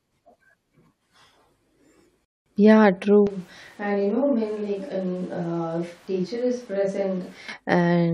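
At 2.25 s the speech halts for about 210 ms and picks up at 2.46 s exactly where it broke off. That is a rebuffering stall: playback ran short of downloaded data and waited. Unlike a dropout, nothing is skipped; time is only added.

From 3.27 s to 7.49 s the speech turns roomy and hollow, thinner in the bass, about 10 dB quieter, with room noise rising to roughly 25 dB below the speech. It is most likely a switch to a distant microphone, not added reverb, because everything changes abruptly at once and reverts just as suddenly.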